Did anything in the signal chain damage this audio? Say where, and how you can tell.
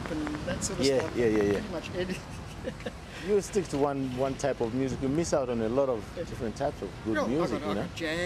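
Yes. From 0.06 s to 1.56 s, a train of clicks ticks over the sound: around ten sharp, near-identical pops at about 6 per second, spaced unevenly, peaking around 15 dB above the signal, so they stand out clearly. Because each click has the same shape and the train starts and stops by itself, something is injecting pulses rather than damaging the audio itself. The cause is likely electrical interference in the analogue wiring or a faulty connection or power supply.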